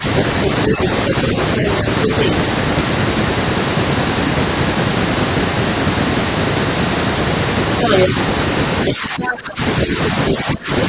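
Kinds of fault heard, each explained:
Speech suppressed in double talk, at 0.0 s, 0.68–2.26 s and 8.9–10.72 s: speech dips, deepest near 15 dB late on, likely an echo canceller turning down overlapping talk.
Other side's voice leaking through, at 2.03–2.28 s and 7.84–8.08 s: a second voice surfaces, once slightly below and once above the speech, likely echo the canceller missed.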